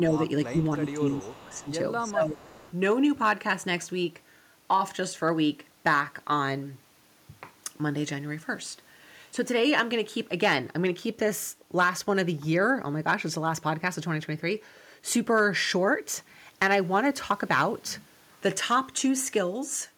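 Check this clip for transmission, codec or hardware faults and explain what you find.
Two echo-canceller problems show up in the first three seconds of this speech clip: residual echo leaking through, and the talker being pushed down during double talk.

Echo leak, at 0.11 to 0.19 s, 0.46 to 0.58 s, 0.86 to 0.9 s, 1.1 to 1.7 s and 2.43 to 2.72 s. The likely cause is a far end playing the call on a loudspeaker whose canceller failed to fully subtract what its microphone picked up, returning the residue down the line. It is heard as a faint copy of the speech trailing by 322 ms, at about 30 dB below the main speech and about 25 dB below around 0.5 s.

Speech suppressed in double talk, at 0.5 to 0.57 s, 0.78 to 1.67 s and 2.07 to 2.56 s. These stretches overlap the echo bursts, which points to the canceller mistaking the near talker for loudspeaker echo while both sides sounded at once, and likely turning everything down. 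The speech dips by about 10 dB in the short first event and about 15 dB in the longer two, with the 0.78 to 1.67 s stretch ducked for most of its length.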